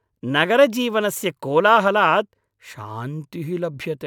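No technical faults are audible.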